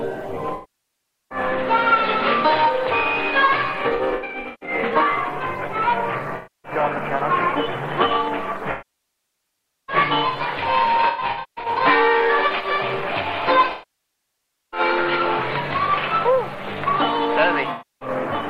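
AAC frame loss with concealment strikes at 0.54–1.38, 3.89–4.93, 6.36–6.72, 8.71–9.96, 11.08–11.81, 13.72–14.80 and 17.71–18.09 s. The decoder rebuilds missing audio from the last good spectrum, giving smeared, noisy patches that appear as blurred spectrogram bands and a flattened waveform envelope.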